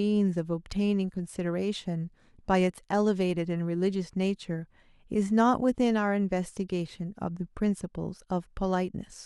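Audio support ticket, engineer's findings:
Listened to the full speech recording and nothing stood out; no findings to log.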